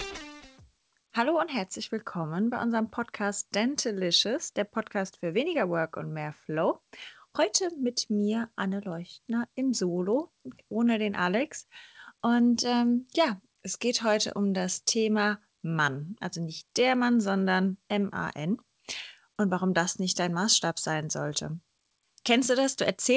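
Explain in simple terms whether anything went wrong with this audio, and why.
Nothing went wrong that I could hear: listening through, nothing stood out, and the slightly muffled top end is just the normal sound of audio carried over an ordinary internet call, which trims away the very highest frequencies above 8 kHz.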